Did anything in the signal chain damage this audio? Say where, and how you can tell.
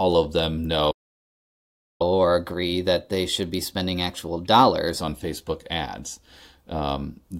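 Yes. At the playback stage, the speech cuts out at 0.90 s and stays silent until 2.02 s, a gap of about 1.09 s. This playback stall likely came from the player's buffer running dry or its output thread being blocked, then resuming.

From 2.02 s to 5.02 s the speech runs at 1.1 times normal speed, with pitch raised by about one and a half semitones, then settles back. This catch-up at higher speed is the player resampling its backlog to recover the time lost in the stall.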